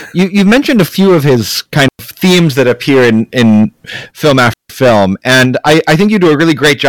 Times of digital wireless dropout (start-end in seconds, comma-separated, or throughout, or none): 1.88-1.99, 4.53-4.70